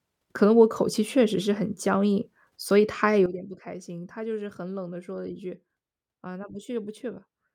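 At 3.26 s the level drops abruptly and stays down to the end of the clip. This is a sudden gain jump of about 12 dB downward. The change happens between one sample and the next, with no fade. It is likely a gain setting or bit shift applied without a ramp. The speech and the background noise fall together, so the whole sound seems to step back at once.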